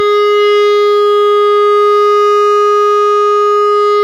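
No audible technical faults anywhere in the music.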